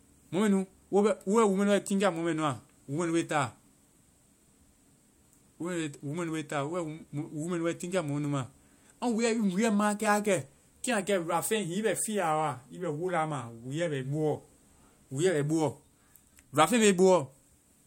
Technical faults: none

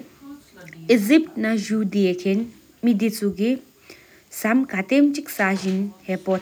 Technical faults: none

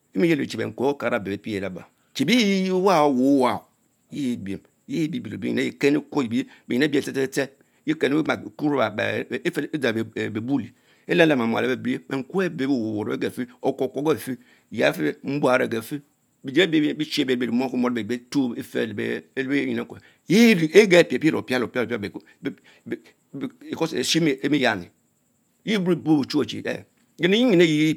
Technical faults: none

